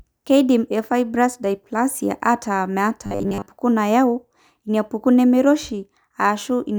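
Robotic sound from repeated short buffers, 3.06–3.47 s: likely a 10 ms buffer replayed across most of it, forcing a rigid 100 Hz buzz.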